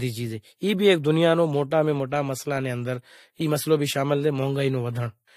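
A short speech clip with transcoding between lossy codecs running all the way through: nothing comes through above about 16.6 kHz, and two different flavours of codec smear sit on top of each other. That's likely a Vorbis encode re-encoded to fairly low-rate AAC-LC.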